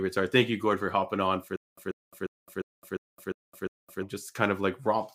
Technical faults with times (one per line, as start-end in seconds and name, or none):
1.56-4.03 stutter with silent gaps